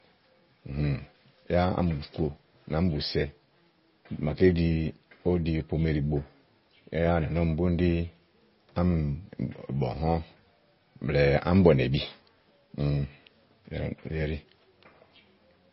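Speech runs through the whole clip with the sound of MP3 compression. Nothing is heard above 5.6 kHz. The s sounds swirl and chirp, and the audio has a watery quality. This is likely heavy MP3 coding at a low bitrate, around 24 kbps.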